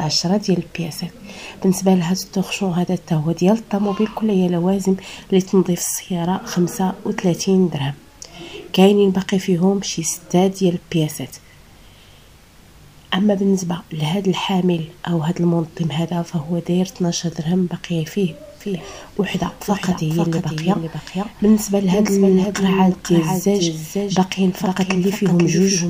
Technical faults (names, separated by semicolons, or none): doubled audio track